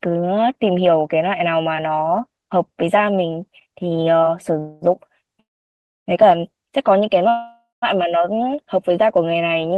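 Speech with three call audio freezes: 4.59–4.84 s, a fading buzz, then 5.40–6.09 s and 7.29–7.84 s, where the buzz decays to silence. Each resumes where it stopped, adding delay without losing audio, likely from delayed packets draining the jitter buffer.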